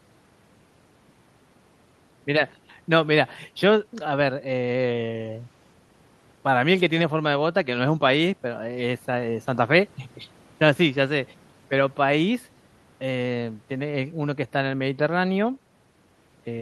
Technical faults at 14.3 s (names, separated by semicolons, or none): none